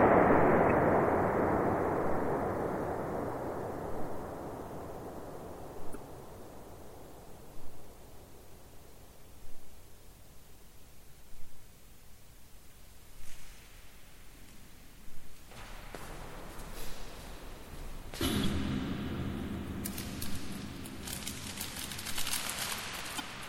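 A recording of everyday sounds carries a constant watery, swirling quality, with metallic chirping on bright, noisy parts and softened attacks, most likely from MP3 compression at a heavy setting, which fits a bitrate around 64 kbps. The encoder cuts off the treble and drops weak frequency components that then flicker in and out between frames. On a spectrogram this appears as a flat ceiling across the top band and scattered, blotchy holes in the quieter regions. On top of that, damaged data in the compressed stream causes five short chirps or blips, each about 40 ms, at 0.67, 5.92, 15.79, 18.41 and 23.16 s. At each one the decoder misreads corrupted frames, loses sync and has to find the next frame header, so a small piece of the sound is garbled or skipped. In the waveform these appear as brief abrupt discontinuities, and on a spectrogram as narrow vertical smears of broadband energy.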